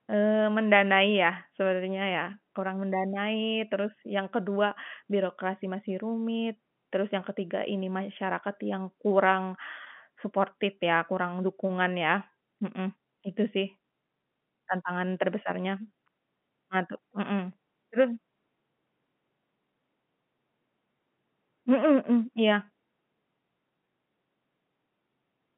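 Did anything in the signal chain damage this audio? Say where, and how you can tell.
No, the speech carries the narrow 150 Hz to 3.4 kHz line band of G.711 telephone coding with nothing above about 3.7 kHz, which fits a 64 kbps mu-law telephone path, and any coding texture stays at most faint.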